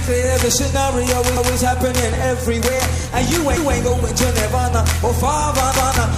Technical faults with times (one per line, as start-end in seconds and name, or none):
1.37-1.57 overlapping chunks
3.57-3.77 overlapping chunks